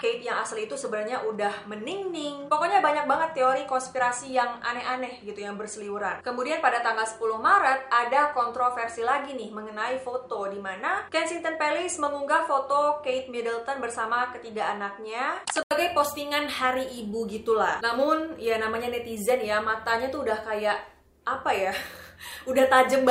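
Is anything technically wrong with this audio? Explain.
Yes. From the start to 15.71 s the sound is band-limited, with nothing above about 10.1 kHz, and it turns dull compared with the remainder. At 15.71 s there is an 80 ms silence, after which the top end opens up again. This pattern is consistent with an input switched to a poorer device, likely a narrower-band microphone or headset path, that returns to the better input at 15.71 s. The first section also carries its own faint noise floor, roughly 45 dB below the signal, and there is no clear level jump at the change.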